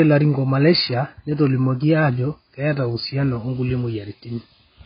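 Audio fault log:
throughout, low-bitrate audio saved at a high bitrate: muffled, smeared speech with nothing above 5 kHz, likely a very low-bitrate AAC encode later re-saved as high-bitrate MP3.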